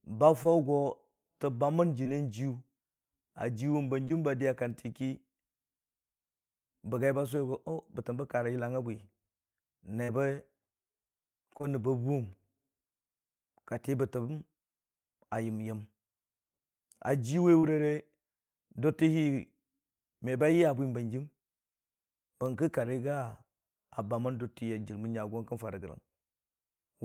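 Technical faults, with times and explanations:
0.43–0.47 s, 2.03–2.07 s, 4.05–4.12 s, 10.04–10.10 s, 11.58–11.65 s and 17.59–17.65 s, short concealed packet loss: each time 20 to 40 ms of the speech didn't arrive, so the decoder stretched the preceding sound across the gap and faded back in, giving quick smears or wobbles.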